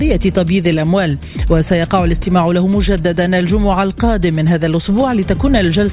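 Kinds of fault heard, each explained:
No technical faults can be heard in this audio. Nothing in it calls for an explanation of any kind.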